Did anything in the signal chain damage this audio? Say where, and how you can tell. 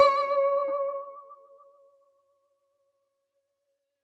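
Yes. In the call-processing stage, a noise suppressor built for speech was left running on this music, causing the noise suppressor to act on music throughout. It mistakes sustained tones and ambience for noise and keeps changing its gain, with swings of around 20 dB. Attacks pass largely intact, but held material and decays are pulled down after them, so the music pumps and flutters instead of sustaining evenly.

The worst moment is a stretch of sound cut by the noise suppressor between 1.29 and 3.09 s. Here the processor classed the sustained sound as noise and attenuated it harder than the rest, with the level dropping by about 10 dB at its deepest. Roughly a second and a half of that span is affected. Tails are truncated and the held sound sinks, while transients still come through.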